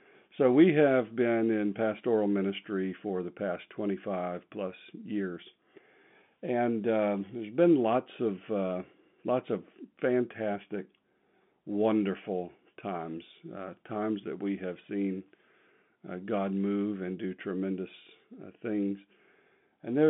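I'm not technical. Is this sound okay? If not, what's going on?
Yes, no faults are audible.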